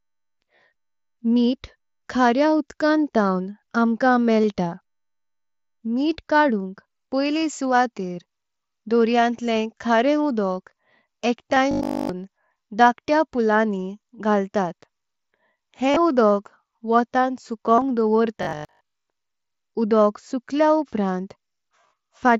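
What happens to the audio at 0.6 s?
A brief buzzy, held tone replaces the speech between 0.56 and 0.62 s, with a slight warble as the real signal returns. This is concealed Bluetooth headset packet loss. Packets dropped across about 60 ms, the longest run being 30 ms, and the receiver filled each gap by repeating a closely matching slice of the waveform just before it.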